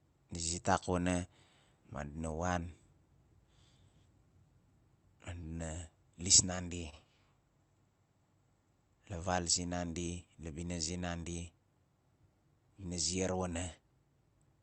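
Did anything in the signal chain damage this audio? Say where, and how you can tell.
Yes. At the network and jitter buffer stage, a short stall from a late packet hits the speech at 6.90 to 6.94 s. A packet arrived late and the buffer ran dry. The receiver stretched the last sound by 27 ms, then resumed without loss. That sound is held slightly long, and the playback delay grows by the same 27 ms.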